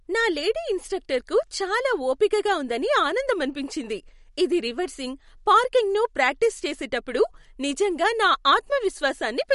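A speech clip with MP3 compression damage from start to finish. Nothing sounds above 11.2 kHz, so the top of the treble is simply gone. The damage is plainly audible. Weak frequency detail drops in and out between frames, giving the sound a watery, swirling texture. The cause is likely an MP3 encoder that ran short of bits. It cut the treble at a fixed point and discarded quiet detail, which fits a low bitrate around 48 kbps.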